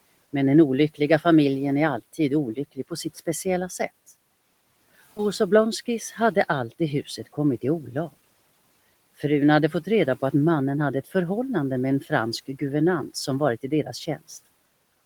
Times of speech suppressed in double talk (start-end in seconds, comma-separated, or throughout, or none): none